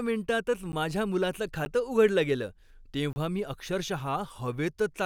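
Blocks of digital silence fall at 0.72 s and 1.65 s, each lasting 10 ms, and again from 3.13 to 3.16 s, lasting 30 ms. In each one the speech drops straight to silence and returns with no fade. The two 10 ms gaps come across as sharp ticks. The 30 ms gap is long enough to register as a brief hole in the speech. This points to the output buffer not being filled in time.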